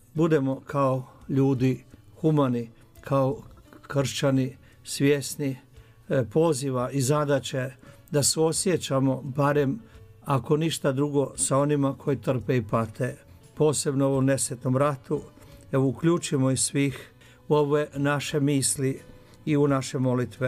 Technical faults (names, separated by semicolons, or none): none